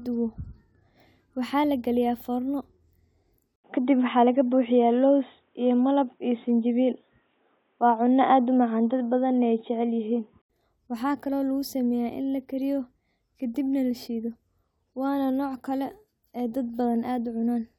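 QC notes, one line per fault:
3.56–10.50 s, input switched to a poorer device: after an 80 ms silence the speech abruptly turns dull and boxy, with nothing above 3.8 kHz, a level shift of around 5 dB and a faint new noise floor roughly 50 dB down. The switch falls just before "waxakali oo", and the sound clears again at 10.50 s. A filter or codec bandwidth drop would narrow the band alone. Here tone, level and noise change together at a gap, most likely because capture moved to another, lower-quality microphone.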